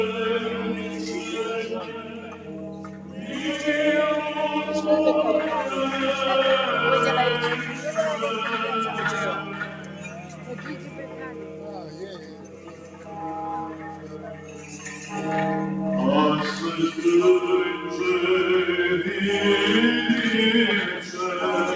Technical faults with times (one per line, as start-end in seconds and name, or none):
0.00-21.76 noise suppressor applied to music or sounds
0.52-1.21 sound cut by the noise suppressor
1.63-3.33 sound cut by the noise suppressor
9.43-13.17 sound cut by the noise suppressor
13.65-14.85 sound cut by the noise suppressor